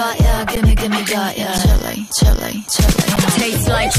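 Three brief dropouts at 0.56, 1.58 and 3.16 s are an underrun with held sample: the output buffer ran dry and the converter held its last value for about 11 ms, which fits a 512-sample buffer. The audio flattens, then resumes where it stopped.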